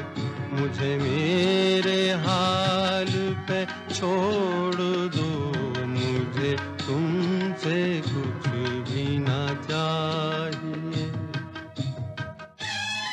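A likely channel dropout, one stereo channel being lost, runs from 12.45 s to the end at 13.12 s. Once the two sides are summed to mono, the level falls abruptly by about 6 dB and is otherwise unchanged.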